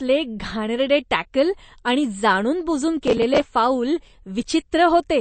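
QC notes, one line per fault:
throughout: MP3 compression, likely the cause of the band-limited, watery character. Nothing is present above about 8.4 kHz, so sibilants lose their top and sound dull. The damage is plainly audible: weak spectral lines switch on and off between frames, giving a swirly, metallic texture on the speech. Fricatives and consonant onsets smear, which fits a low bitrate in the region of 35 kbps, where the encoder strips content it cannot afford to keep.
3.08–3.40 s: processor overload crackle. A run of missed audio deadlines produces a burst of gritty tearing laid over the speech for about a third of a second. The interval suggests buffers of roughly 10 ms, with around ten deadlines missed in succession. Each miss replays a fragment of old audio with hard edges instead of the correct block, so the discontinuities stack into crackle that stops abruptly once the load clears.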